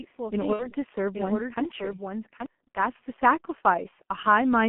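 A speech recording that sounds muffled and hoarse from start to finish, with smeared consonants and nothing above about 3.4 kHz or below about 200 Hz. This is G.723.1 codec damage, and it is heavy. The codec works in 30 ms frames and squeezes the signal into a narrow telephone band at a rate that points to roughly 6 kbit/s. Its voice model updates too slowly to follow quick consonant changes, so those edges blur and the tone turns rough. From the very beginning until 2.46 s, a second copy of the speech runs underneath, roughly 0.7 s behind and about 5 dB quieter. This copy is as full and dry as the original, with no decay or room colour, and it cuts off abruptly at 2.46 s. That is a doubled audio track, likely from the same audio being captured a second time through a slower path, or from an edit that left two copies out of step. Between 0.53 and 0.74 s the speech briefly turns into a buzzy tone or coloured noise that fades, and stays weak and distorted a little after the gap. 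This is VoIP packet loss concealed by the speech codec. About 60 ms of audio went missing, which fits two lost 30 ms frames. The decoder filled the hole by repeating its last pitch and filter at falling gain, and because each frame builds on the previous one, the damage lingered briefly once packets resumed.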